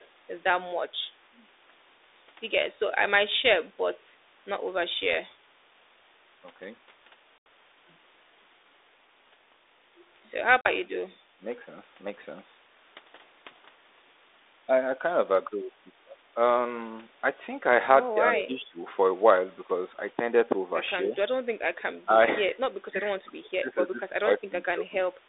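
Echo leak appears in this speech clip from 0.0 to 0.08 s and again from 18.35 to 18.43 s: a copy of the voice trailing by 265 ms, very faint at the start and much stronger, only about 10 dB below the speech, near 18.4 s. The likely cause is that the far end's loudspeaker echo canceller left part of its microphone pickup in the return path. Packet loss on an ADPCM call hits at 7.38 to 7.46 s, with 80 ms gone, and at 10.61 to 10.71 s, with 40 ms gone. Each gap is a hard-edged silence, and the speech that follows comes back briefly slightly distorted while the decoder's predictor and step size resynchronise with the sender's. Speech suppressed in double talk dips the voice at 10.84 to 11.45 s, 18.18 to 18.82 s, 21.04 to 21.17 s, 22.05 to 22.19 s and 22.89 to 25.13 s. The drops range from slight to deep, with the deepest in the first and last stretches. This is likely an echo canceller that mistook overlapping far-end talk for echo and attenuated both.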